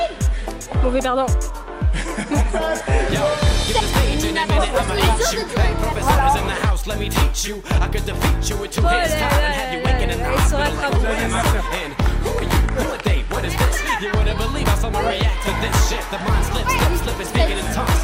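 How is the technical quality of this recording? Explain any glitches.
The technical quality of this recording holds up, with no glitches to explain.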